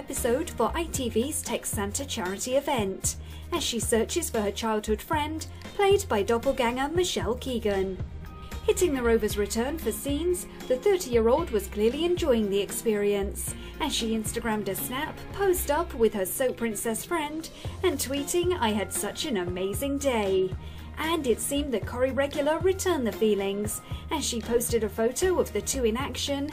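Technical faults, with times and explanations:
No technical faults detected.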